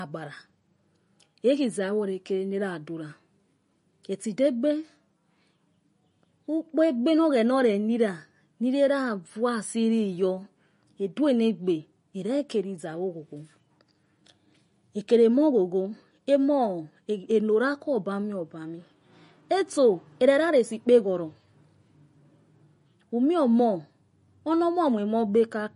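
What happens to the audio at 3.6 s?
At 3.6 s the speech carries MP3 compression artefacts, present throughout the clip and likely from a low-bitrate encode around 40 kbps. Short of bits, the encoder removed everything above 10.6 kHz and let weak frequency lines flicker between frames, giving a dull, watery, swirling quality.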